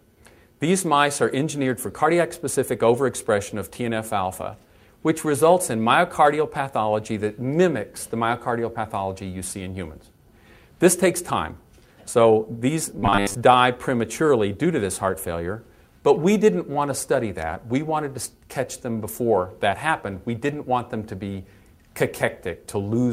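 From 12.99 to 13.35 s the audio turns into a rigid, metallic buzz at 100 Hz: robotic sound, likely from a 10 ms buffer repeated over most of that stretch.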